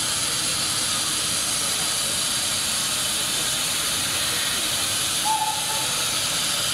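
No technical faults can be heard anywhere in this recording. Nothing in the signal chain stands out as going wrong at any point.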